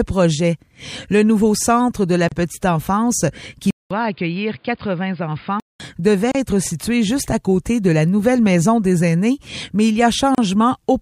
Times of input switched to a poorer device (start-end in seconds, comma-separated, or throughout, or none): 3.71-5.80